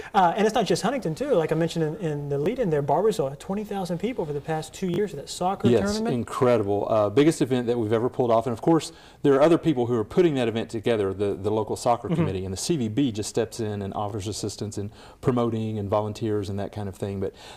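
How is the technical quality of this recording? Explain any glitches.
The recording has three brief repeated-buffer glitches, at 2.44–2.46 s, 4.94–4.98 s and 14.1–14.12 s. Each time, fresh audio arrived late, so the last block, consistent with a 20 ms buffer, played again, replacing roughly 20 ms (40 ms at 4.94 s, repeated twice). Each is heard as a click-like stutter. On a waveform, identical copies sit side by side with abrupt seams, and a spectrogram shows thin vertical lines at each join.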